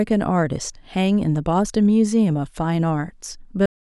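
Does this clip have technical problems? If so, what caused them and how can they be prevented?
Yes. The final buffers were never written out, so this speech clip has a cut-off end: at 3.66 s the sound stops mid-utterance and falls straight to digital silence, with no natural decay, for the last third of a second. Flushing and closing the recording stream properly before stopping would prevent it.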